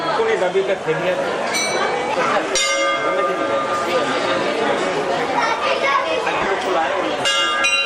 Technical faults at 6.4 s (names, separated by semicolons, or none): lost LE Audio frames